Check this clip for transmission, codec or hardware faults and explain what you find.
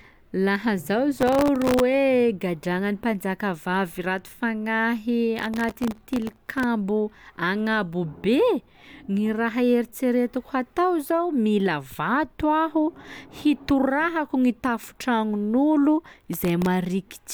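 Processor overload crackle at 1.18 to 1.80 s, 5.39 to 6.64 s and 16.24 to 16.66 s: tiny buffers, under a millisecond each, missed their deadlines about 50, 70 and 15 times across each stretch and were filled with stale audio, giving a hard-edged gritty tearing over the speech.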